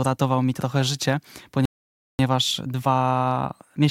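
At 1.65 s the speech breaks off mid-flow and the output falls completely silent until 2.19 s, a playback stall lasting about 0.54 s. The likely cause is the player running short of buffered data or its audio thread being blocked, so nothing reached the output. On a waveform this shows as a flat, near-silent line with abrupt edges on both sides. A spectrogram shows a clean vertical band of empty time across every frequency.

From 2.19 s to the end the speech resumes as a time-compressed catch-up, running at about 1.15 times normal speed while pitch stays unchanged. The player is trimming its backlog by cutting out short slices and cross-fading across the joins. That makes the delivery sound hurried. A spectrogram shows harmonics at their normal spacing but syllables squeezed closer together, with slight smearing at the joins.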